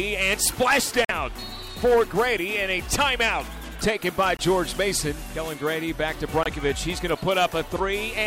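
At 1.05 s, 4.37 s and 6.43 s the sound vanishes for 46.4, 23.2 and 23.2 ms, a Bluetooth dropout, likely from late packets being discarded. Each gap appears as a blank full-band stripe on the spectrogram and a flat gap in the waveform.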